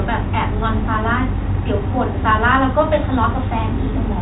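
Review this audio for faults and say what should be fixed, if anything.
Nothing here needs fixing: the speech arrives through G.711 telephone coding as expected, with the band stopping at about 3.8 kHz and only the faint, level-following quantisation hiss that format always carries.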